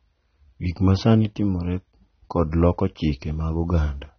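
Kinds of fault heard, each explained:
AAC compression: likely low-bitrate AAC-LC coding, which fits about 24 kbps. The encoder discards detail its hearing model deems expendable. Here the speech has nothing above roughly 6.3 kHz, sounding dull and smeared, with plainly audible warbling, fizzy texture on sibilants and sustained sounds throughout.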